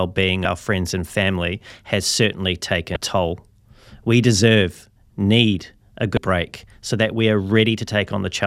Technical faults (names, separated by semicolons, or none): damaged data in a compressed stream